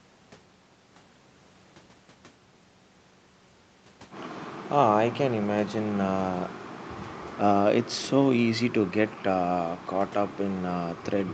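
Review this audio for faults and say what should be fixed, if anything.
Nothing stood out on listening to the speech in this recording, so there is nothing here that needs fixing.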